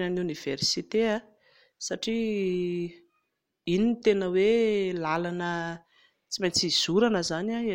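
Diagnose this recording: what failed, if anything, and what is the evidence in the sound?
Nothing in the speech signal points to a failure at any stage of the chain; the level, continuity and timing hold steady throughout, with no audible disturbance to trace back to wiring, conversion, processing, transmission or playback.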